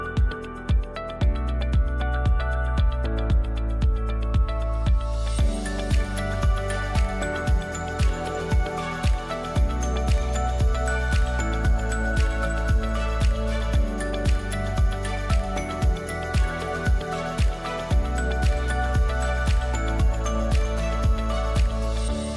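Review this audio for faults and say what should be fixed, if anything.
Nothing here needs fixing; I listened all the way through and didn't hear anything worth flagging.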